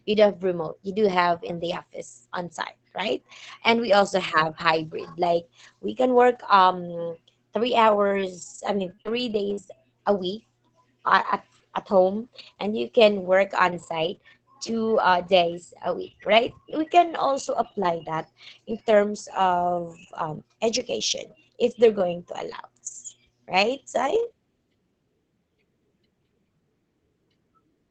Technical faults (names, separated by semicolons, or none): repeated packet loss (robotic sound)